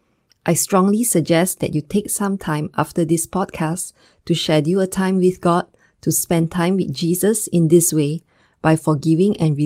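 No audible faults turn up anywhere in the speech recording.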